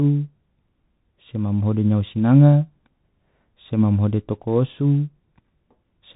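From start to end the speech sounds boxed-in and dull, with scratchy s sounds and a grainy hiss beneath. That is the Bluetooth CVSD headset codec: one bit per sample steers the waveform up or down, which fits a 64 kbps stream, cutting everything above 4 kHz and blurring fast, bright detail.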